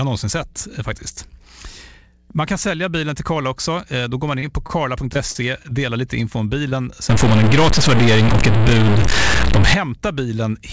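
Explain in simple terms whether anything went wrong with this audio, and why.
Several things go wrong in this speech recording, all from about the middle onward.

Twice the sound briefly smears or wobbles: from 4.40 to 4.44 s, right after "går man", and from 6.69 to 6.73 s, right after "lite info om". Each is short concealed packet loss. About 20 ms of the call never arrived in time, so the receiver guessed at it by carrying the previous sound forward and then blending back into the real audio.

At 4.67 to 4.71 s a sound hangs on a little too long. This is a short stall from a late packet. A piece of the call was late, so the receiver stretched the last sound for about 25 ms until it arrived. Nothing is actually missing here. The sound just pauses and then continues from where it stopped.

From 5.13 to 5.73 s, just before "lite info om", the speech turns choppy, with pieces missing. This is repeated packet loss. 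Four separate holes appear close together, the longest about 37 ms. Each one is patched by extending the previous sound, and together they lose about 60 ms of real audio.

From 7.09 to 9.74 s the sound becomes distorted, with noise creeping into the quiet moments. This is a stuck bit. One digit in the digital audio values seems frozen, most likely from a faulty connection or converter. That knocks many sample values off by a fixed step, which is heard as distortion. Separately, the call link carries nothing above 8 kHz, so the sound is a little dull.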